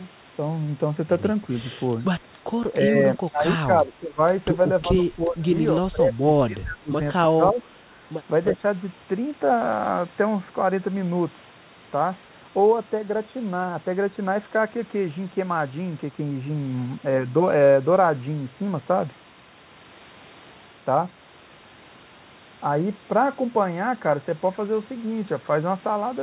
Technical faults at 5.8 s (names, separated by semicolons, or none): speech suppressed in double talk